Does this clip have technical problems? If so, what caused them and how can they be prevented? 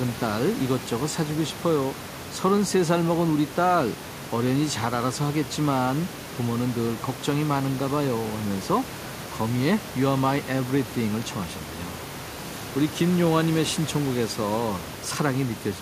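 No, this clip has no technical problems, so there is nothing to prevent.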